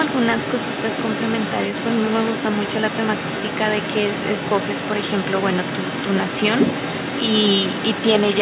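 From 0 to 8.41 s, the other side's voice leaks through. The far end was likely played on a loudspeaker and not fully removed by the echo canceller, so a second voice runs beneath the speech throughout, around 10 dB quieter, within a band ending at 4 kHz.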